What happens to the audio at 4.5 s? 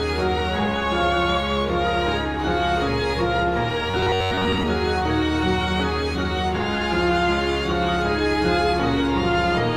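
At 4.5 s the music is in the middle of a stretch of robotic sound from repeated short buffers, running from 3.91 to 4.64 s. For most of that span the same short fragment is played over and over, locking a rigid metallic buzz at about 94 Hz onto the music, which fits a repeated block of roughly 10.7 ms. The likely cause is new audio arriving too slowly, so the playback fills the gaps with repeats and skips the real material.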